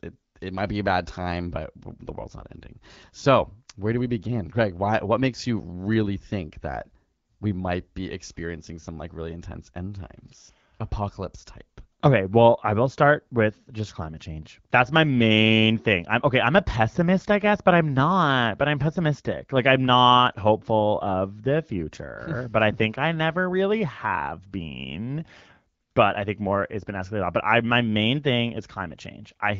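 No technical faults can be heard in this recording.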